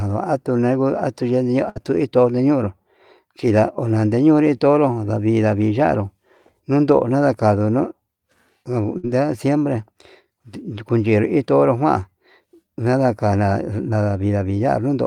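A brief held buzz or fading smear interrupts the speech twice, at 1.69 to 1.78 s and at 8.98 to 9.05 s, and the sound resumes slightly further along each time. These are bursts of packet loss. Packets never arrived in time, so the receiver stretched the last sound and faded it out for about 60 ms. That fill covered 60 ms of speech that is simply gone.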